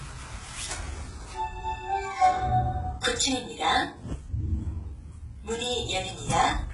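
A recording of everyday sound, and across its whole length the top end sounds bright but false: the treble is gritty and metallic and doesn't sit naturally on the body of the sound, and there is nothing at all above about 11.1 kHz. The likely cause is heavy HE-AAC compression, which fits a very low bitrate around 12 kbps. The codec keeps only the lower spectrum and rebuilds the treble by copying lower bands upward, so the high harmonics don't match the original.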